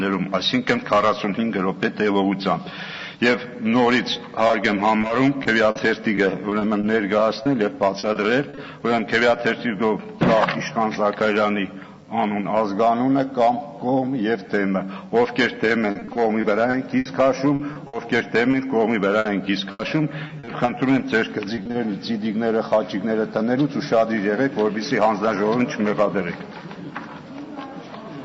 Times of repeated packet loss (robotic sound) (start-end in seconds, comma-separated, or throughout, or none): 4.13-8.59, 15.91-18.55, 19.19-20.69, 21.55-21.75